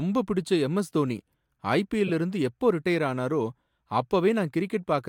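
At 2.07 to 2.11 s, just before "இருந்து எப்போ ரிட்டயர் ஆனாரோ", a short chirp, squeak, blip or burst of noise cuts across the speech, peaking at around -20 dBFS and lasting about 40 ms. This is a corrupt frame decoded: bits inside a few consecutive compressed frames, about three here, were flipped, and the decoder played them anyway. Misread gains and codes placed energy at the wrong frequencies for the span of those damaged frames.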